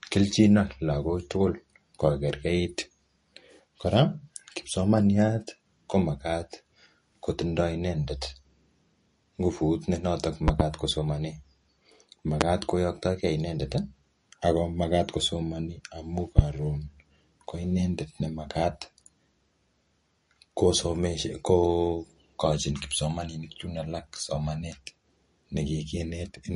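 Low-bitrate MP3 compression, likely around 40 kbps given how plainly it shows, runs through the whole speech recording. Short of bits, the encoder has discarded everything above 10.6 kHz, so the sound is dull at the top, and it has thinned out weaker frequency detail that flickers from frame to frame. That leaves a watery, swirling texture, metallic chirps on sibilants and smeared consonant attacks.

Separately, voltage spikes, likely from a connector, switch or static discharge, break into the signal three times as loud pops. From 10.48 to 10.63 s there are two pops in quick succession, peaking about 20 dB above the speech. Single pops follow from 12.41 to 12.44 s and from 16.39 to 16.42 s, each about 25 dB above the speech. Each is a sharp crack laid on top of the audio, and the speech carries on underneath.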